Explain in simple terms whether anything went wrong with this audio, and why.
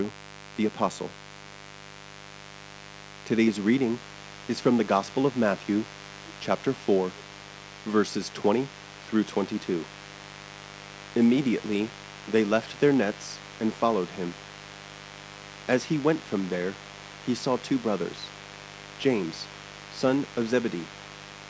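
Two things went wrong. The first is mains buzz, present from start to finish. Electrical interference from the 50 Hz power supply, typically through something like a light dimmer, a power adapter or an unshielded cable, leaked into the recording. Those sharp electrical spikes repeat many times a second, so underneath the speech you hear a constant, rough, raspy hum. It sits clearly below the speech but never goes away.

The second is an echo leak, heard from 6.56 s to 15.68 s and again from 15.88 s to the end of the clip. This is likely because the other person on the call was using a loudspeaker, and their phone or computer failed to fully cancel the sound its own microphone picked back up. That leftover sound was sent back, so you hear a faint second copy of the speech trailing about 0.4 seconds behind the original. It is quite weak in the first stretch and somewhat stronger in the second.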